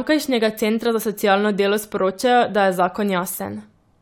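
Nothing goes wrong anywhere in this bit of speech, so there's no technical fault to point to at any moment.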